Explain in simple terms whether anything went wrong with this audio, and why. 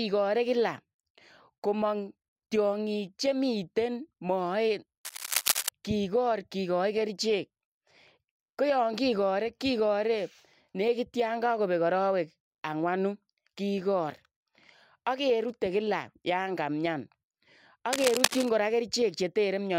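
A worn cable, plug or control was likely being moved, so the electrical contact kept breaking and remaking. That is cable scratch noise: rough, uneven bursts of crackle laid over the speech, about as loud as the speech itself. It happens twice, from 5.05 to 5.69 seconds, ending just before "kigoor kigaai", and again from 17.93 to 18.49 seconds. Each burst lasts just over half a second, then clears.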